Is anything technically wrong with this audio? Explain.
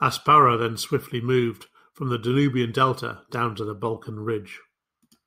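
No, nothing technically wrong turns up anywhere in this speech recording, so there's nothing here to flag.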